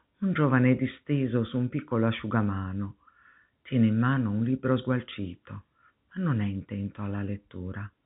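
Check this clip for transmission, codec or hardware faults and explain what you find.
Nothing's wrong here: the speech comes through as ordinary G.711 telephone coding, with the usual band limit leaving nothing above about 3.8 kHz, and there's no fault of any kind to report.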